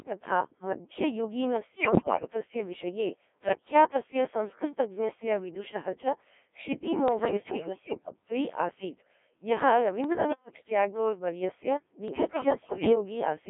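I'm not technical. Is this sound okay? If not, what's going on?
No. The whole recording went through a Codec 2 vocoder, a system for digital radio that sends only a rough outline of the voice: its pitch, loudness, buzz, and overall tone shape. The receiver then rebuilds the speech from scratch out of simple tones. Because the real sound wave is never sent, the voice comes out robotic, buzzy, and heavily processed, with a thin phone-like range that cuts off the lowest and highest sounds.

There are also four moments of bit errors on digital voice radio. Some of the transmitted data was corrupted, as happens at the edge of radio coverage. With so little data sent, one wrong bit can throw off the pitch, loudness, or tone of a whole slice of sound. The result is sudden jumps, warbles, and garbled robotic noises. This happens from 1.76 to 2.30 seconds, just before "विषये प्रख्यातस्य संस्कृतज्ञस्य विदुषः", which is the worst of the four. 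It happens again from 7.08 to 8.13 seconds, from 10.04 to 10.70 seconds just before "ट्यागोर् वर्यस्य", and from 12.08 to 12.95 seconds right after "ट्यागोर् वर्यस्य".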